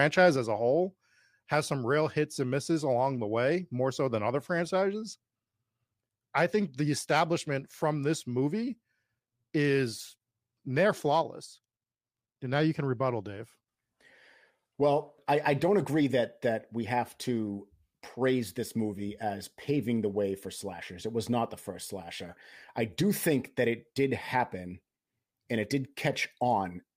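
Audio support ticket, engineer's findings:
Sudden gain jump at 0.36 s, likely a digital gain change applied without a ramp; speech and background noise drop together by about 4 dB through the end.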